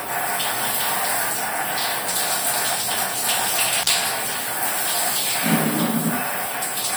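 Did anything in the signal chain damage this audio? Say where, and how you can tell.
Yes, an intermittent contact in the analogue wiring breaks the sound between 3.81 and 3.90 s, with the line open for about 38 ms. The crackle at the edges of the gap points to a loose plug or cable rather than a clean digital dropout.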